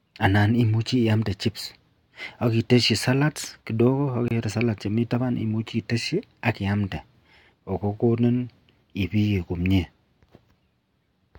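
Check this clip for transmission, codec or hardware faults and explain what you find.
One codec fault shows up in this speech. At 4.28 to 4.31 s there is a gap at a join of encoded pieces: untrimmed encoder delay and padding leave a 26 ms silence with softened edges before the sound resumes.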